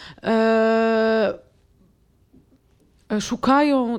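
No technical faults can be heard anywhere in the recording; nothing interrupts or alters the signal.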